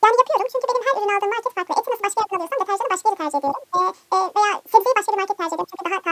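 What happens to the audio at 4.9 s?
At 4.9 s the audio is affected by a wrong sample rate fault that runs through the whole clip. The speech plays twice as fast and a full octave (12 semitones) higher, which fits material recorded at 16 kHz being played back at 32 kHz with no conversion. It sounds chipmunk-like and rushed. On a spectrogram, harmonics and formants sit an octave up with doubled spacing. In the waveform, syllable envelopes are squeezed to half their normal duration.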